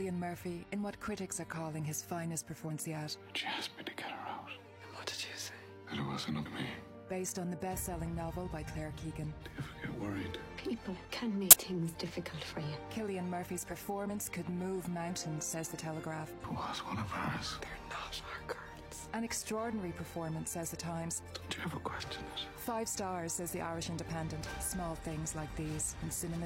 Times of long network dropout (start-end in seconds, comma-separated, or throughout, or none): none